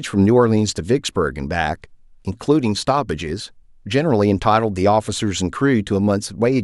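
Sharp single clicks at 2.56 s and 5.27 s in the speech, likely dropped samples: a handful go missing, so the waveform jumps abruptly.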